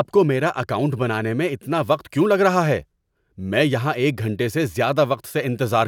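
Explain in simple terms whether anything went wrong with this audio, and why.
Nothing went wrong; no faults can be heard here.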